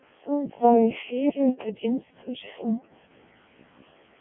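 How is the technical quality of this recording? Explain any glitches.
Poor: throughout, the speech has passed through a Codec 2 vocoder, heavily damaged. It sounds robotic and buzzy, band-limited to roughly 200 Hz–3.5 kHz with nothing above 3.6 kHz, which fits the lowest, 700 bit/s mode. The decoder resynthesises from pitch and envelope, discarding the waveform.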